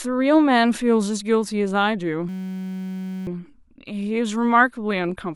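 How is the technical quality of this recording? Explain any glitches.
The recording has one clear glitch. A system hang loop runs from 2.29 to 3.27 s: the system froze while the audio hardware kept replaying one 5.33 ms slice, which fits a 256-sample buffer. Repeating at 188 Hz, it sounds like a steady buzz, and about a second of speech is lost.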